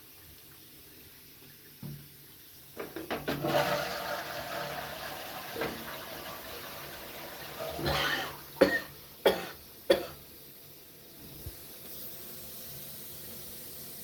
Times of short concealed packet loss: none

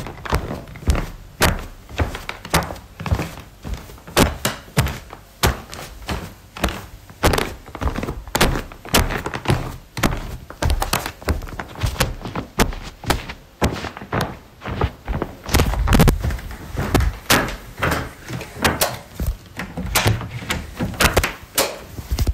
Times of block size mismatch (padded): none

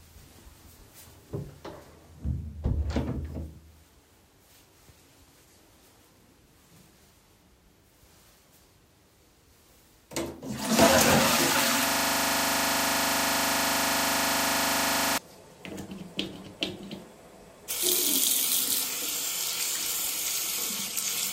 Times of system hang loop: 11.88-15.18

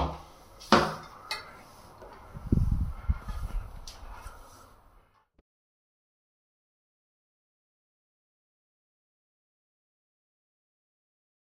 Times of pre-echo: none

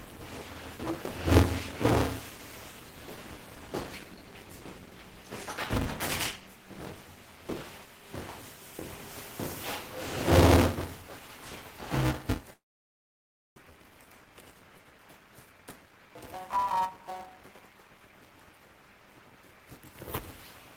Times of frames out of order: none

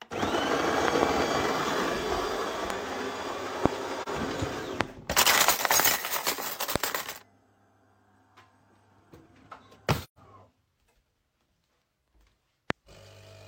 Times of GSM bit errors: none

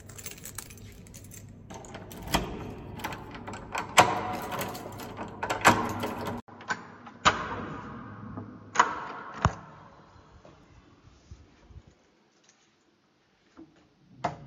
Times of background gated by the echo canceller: none

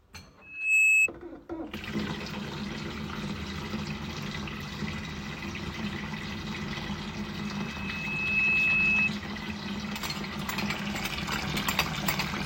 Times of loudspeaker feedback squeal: 0.41-1.09

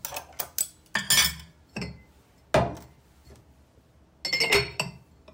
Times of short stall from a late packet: none

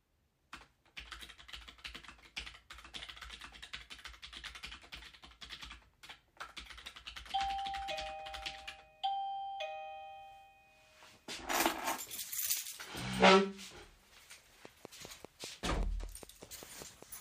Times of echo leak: none

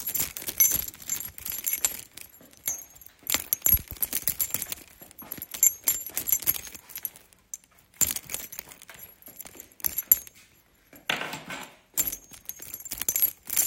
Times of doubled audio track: none

